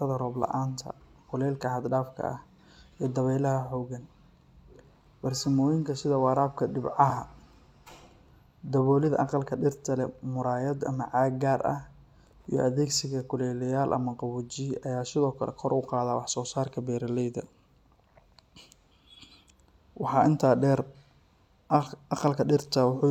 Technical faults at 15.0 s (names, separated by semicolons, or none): none